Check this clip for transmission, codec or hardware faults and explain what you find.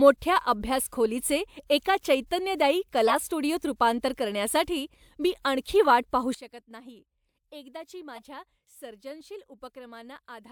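Yes, the clip has two kinds of fault. Corrupted frames were played three times, and there is one abrupt drop in level.

Corrupt frame decoded. The first comes from 3.07 to 3.17 s, after "अभ्यास खोलीचे एका चैतन्यदायी" and before "स्टुडिओत रूपांतर करण्यासाठी मी". It spans a few frames. The second is at 5.85 to 5.90 s, after "रूपांतर करण्यासाठी मी आणखी". The third is at 8.16 to 8.20 s. Flipped bits in each compressed frame made the decoder put energy at the wrong frequencies. Each one sounds like a short chirp or burst of noise. The first two are loud. The third is much fainter.

Sudden gain jump. At 6.35 s the level falls by about 17 dB in one step and stays there to the end. The speech and the background noise drop together. There is no fade. The likely cause is a digital gain change applied between two samples without a ramp, such as a setting change or a bit shift.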